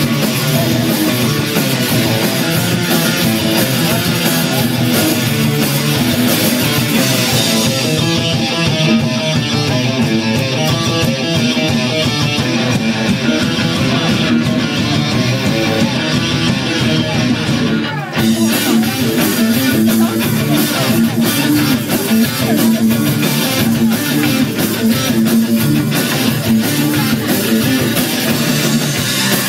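Nothing technically wrong can be heard in this audio. There are no faults to report, and no times or causes to give.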